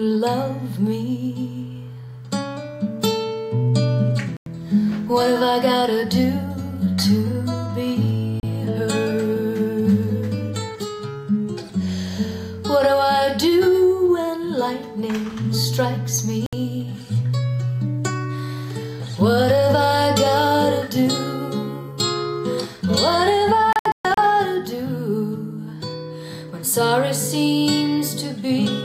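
The audio has four digital broadcast dropouts, where the receiver mutes on bad frames: 4.37–4.47 s, 8.40–8.44 s, 16.46–16.53 s, and a cluster from 23.73 to 24.18 s with several holes totalling about 256 ms, the longest 128 ms. The gaps come in steps of about 32 ms, suggesting whole lost frames. Unlike concealment glitches, the holes are clean silence rather than smeared or repeated sound, and the programme resumes further on.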